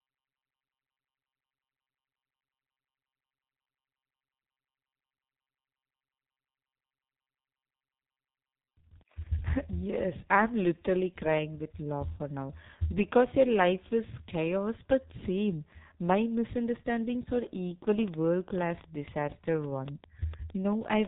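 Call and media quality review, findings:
G.723.1 codec, whole clip. Speech muffled and hoarse, consonants blurred, no content above 3.8 kHz. Sound fits the 6.3 kbit/s G.723.1 mode with heavy coding damage: 30 ms frames and a slowly updated voice model smear transients. Unlike a plain low-pass filter, the rasp and smeared onsets remain, not just dullness.

Train of clicks, 17.99 to 21.06 s. About 20 similar-shaped pops, roughly 7.5 per second, irregular spacing, peaks about 10 dB above the speech, audible in pauses too. Likely interference or a struggling interface injecting pulses. Distinct from codec frame artefacts: uneven timing, not locked to 30 ms frames, and independent of the speech.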